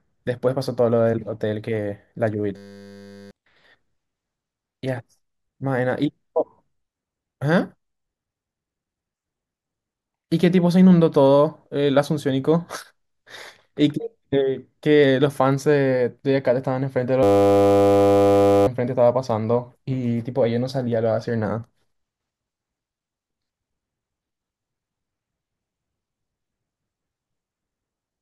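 At 2.57 s the speech stops and a system hang loop takes over until 3.31 s. A single 10 ms slice of audio repeats exactly, pointing to a 10 ms ring buffer that the hardware kept replaying after the driver stalled. At 100 Hz the loop sounds like a steady buzz, and roughly 0.7 s of speech is lost. The same fault returns from 17.23 s to 18.67 s, with the same 100 Hz buzz and about 1.5 s of speech missing.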